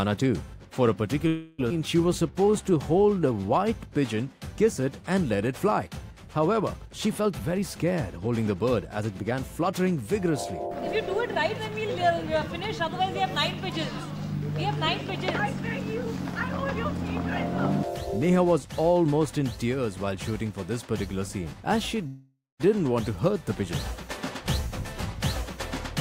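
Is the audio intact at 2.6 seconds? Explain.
No, a jitter buffer slow-down runs from 1.73 to 3.66 s. Running short on reserve, the receiver repeated single pitch periods many times over, adding 232 ms and playing at 88% speed, so the sound drags at unchanged pitch.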